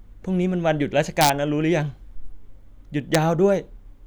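A sum or gain let the signal exceed the largest integer, and instead of being limited it wrapped to the opposite sign. This integer overflow throws loud speech peaks across the full range as violent cracks, from 1.21 to 1.29 s at about 3 dB over, and again at 3.15 s, right at the limit.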